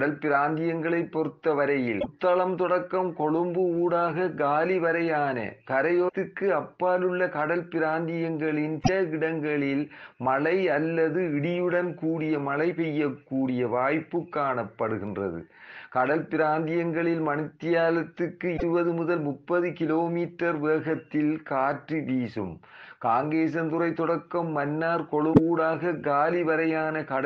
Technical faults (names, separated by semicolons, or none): damaged data in a compressed stream